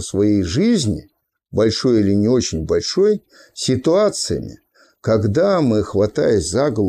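No technical faults are audible anywhere in the recording.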